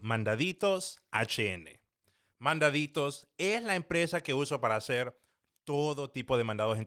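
Nothing here points to any technical fault.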